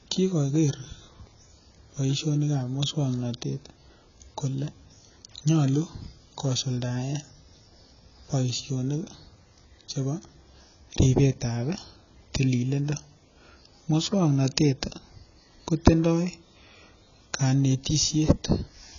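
Throughout the speech, the audio is band-limited, with nothing above 7 kHz, and heavily damaged in a way that points to AAC compression, likely AAC-LC at a low rate, which fits a bitrate around 16 kbps. The encoder has spent too few bits per frame on the spectrum, so the top end is cut off and bands are left sparse or patched. Sibilants come out dull and fizzy, and sustained sounds warble and smear.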